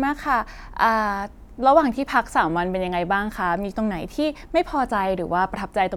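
No technical faults are audible.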